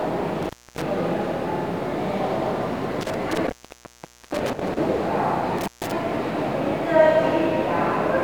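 Intermittent contact breaks the sound at 0.43–0.82 s, 3.01–4.78 s and 5.58–5.92 s. A loose connection opens for about 0.26 s, 0.83 s and 0.14 s, with crackle and faint hiss.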